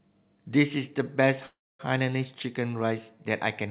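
Speech over a narrowband call path, with nothing above 4 kHz, consistent with G.711 mu-law at 64 kbps. A call audio freeze runs from 1.46 to 1.81 s: the sound stalls into a brief fading fill, then about 260 ms of silence. Playback resumes where it stopped, adding 332 ms of delay with nothing lost, likely jitter buffer underrun from delayed packets.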